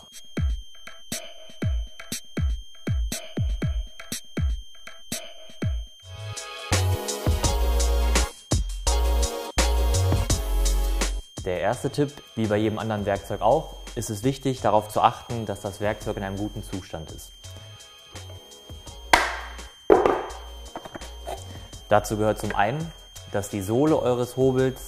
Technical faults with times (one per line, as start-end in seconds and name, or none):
0.00-24.88 switching supply whistle